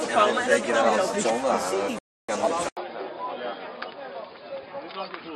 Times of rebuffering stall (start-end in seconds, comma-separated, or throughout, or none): 1.99-2.29